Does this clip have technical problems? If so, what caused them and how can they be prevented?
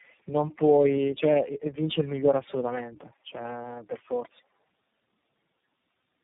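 Yes, there's tandem speech coding running through the whole clip. The speech sounds rough, muffled and warbly, with nothing above about 3.8 kHz. That points to the call passing through several low-rate speech codecs in a row, something like iLBC, G.729A and AMR-NB with G.711 hops in between. Each border decodes and re-encodes, so every coder works on the previous one's damage and the artefacts pile up. To prevent it, keep the call in one codec end to end with transcoder-free operation or codec pass-through at the gateways.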